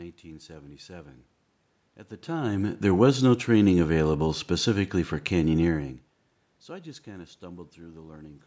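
No technical faults; the level shifts around 2 s and 5.5 s are the talker moving relative to the microphone, and the room noise and call microphone processing, with nothing above 8 kHz, are normal.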